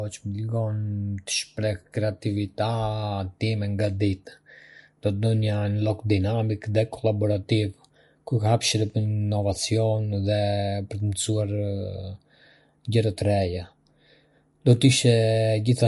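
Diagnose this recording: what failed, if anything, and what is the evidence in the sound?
The codec stage likely applied MP3 compression at a low bitrate: the speech is band-limited above 11.3 kHz throughout, with watery, swirling artefacts on sibilants.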